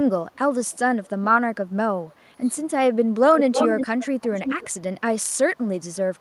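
From 0.31 to 1.1 s an echo leak is audible: a faint copy of the speech trailing it by 363 ms, some 35 dB down. This is likely a far-end loudspeaker whose echo canceller let part of the microphone pickup through and sent it back. A brief scrap returns at 1.68 to 1.72 s, fainter still at around 40 dB below.

From 1.86 to 2.51 s the speech is suppressed in double talk. The level sags by up to about 15 dB while the other side is talking, likely because the canceller could not separate the local talker from the echo and attenuated both. A shorter dip of about 10 dB follows at 3.05 to 3.15 s.

From 3.38 to 4.68 s the echo leak returns much stronger. The copy now lags by 323 ms and is roughly as loud as the speech itself, which produces a clear doubled effect.

At 4.7 s the double-talk suppression sets in again and lasts to the end of the clip, pulling the speech down by up to about 15 dB.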